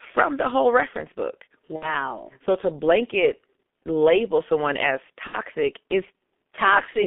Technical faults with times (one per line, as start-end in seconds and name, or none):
0.00-7.07 G.723.1 codec
1.76-1.95 VoIP packet loss concealed by the speech codec
5.27-5.38 VoIP packet loss concealed by the speech codec